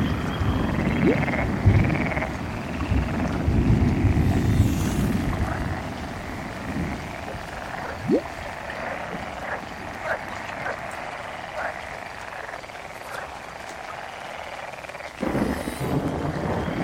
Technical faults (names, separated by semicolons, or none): train of clicks